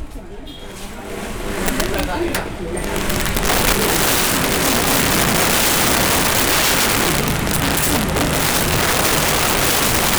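Integer overflow runs through the whole recording: the loudest peaks are driven about 11 dB past the integer limit, and instead of being held flat they wrap to the opposite extreme. A small share of samples crosses that line, producing violent cracks far harsher than the softer buzz of clipping.

From 8.31 s to the end, the pace suddenly jumps to about 1.59 times normal while the pitch stays put, so the audio sounds rushed. That separates it from a plain speed-up, which would raise pitch, and points to a likely time-stretched section where short pieces were dropped.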